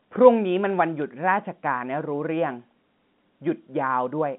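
At 1.02 s, bit errors on a digital phone line flip a few bits in the G.711 stream, at a rate of roughly one in a thousand. Each damaged byte decodes to one wrong sample in the otherwise unchanged telephone-band speech.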